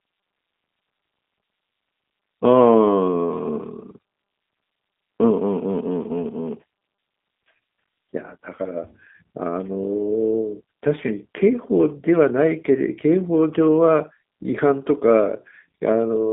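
From start to end the speech carries plainly audible G.729 codec damage: a band-limited 8 kbit/s model rebuilding speech from pulses, nothing above 3.8 kHz, sounding rough and synthetic.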